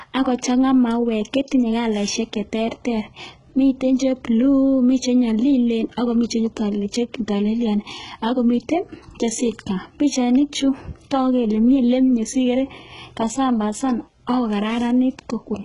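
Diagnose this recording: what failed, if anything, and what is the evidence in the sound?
The codec stage likely failed: heavy HE-AAC compression at a very low bitrate, consistent with about 12 kbps. Throughout the speech, the treble is synthesised by copying lower bands upward rather than coded, so s sounds come out gritty and metallic, and nothing remains above 11.1 kHz.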